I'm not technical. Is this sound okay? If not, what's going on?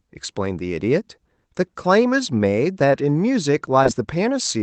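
No, there's one small glitch. At about 3.83 to 3.87 s you'll hear a quick smear or wobble in the speech. That's short concealed packet loss: a tiny piece of the call arrived too late, so the receiver papered over the gap by stretching the sound just before it.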